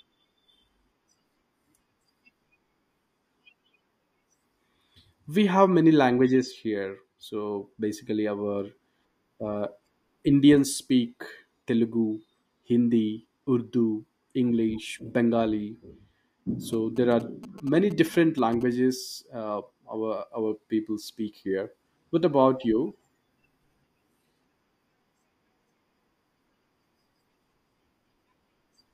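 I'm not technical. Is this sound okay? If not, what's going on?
No. A 2G mobile phone near the recording gear sent short bursts of radio signal, and the audio circuit picked them up. These GSM signalling bursts come through from 16.73 to 18.63 s as a galloping ticking and buzzing pattern, well below the speech in loudness.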